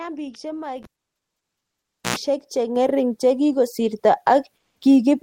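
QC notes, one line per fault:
0.83–2.16 s, cable pulled and plugged in: pop, 1.28 s of near silence, then an 89 ms burst of 60 Hz mains buzz and a second pop; unlike a dropout, the buzz marks the plug's tip touching before it seats.
1.02 s and 2.76 s, microphone volume stepped up: voice and background jump together by about 9 dB, then about 4 dB, and stay there; unlike a compressor, the rise is instant and never recovers.
4.56–4.81 s, comfort noise in place of the background: for 250 ms the detailed background, about 54 dB below the loud parts, becomes steady featureless hiss about 4 dB quieter, likely Opus DTX filling a pause; unlike a gate, it is not silence.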